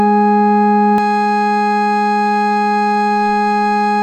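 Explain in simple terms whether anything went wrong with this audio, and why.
From 0.98 s to the end at 4.02 s, the music has pre-emphasis left on. The treble was boosted for recording or transmission, but the matching cut was never applied afterwards, so the high end stays too loud, making the music thin, bright and sharp-edged.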